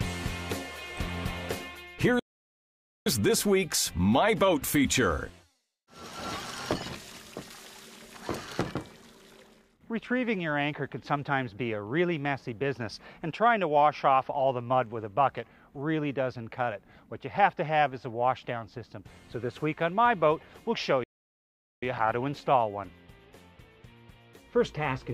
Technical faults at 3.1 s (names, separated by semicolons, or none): playback stall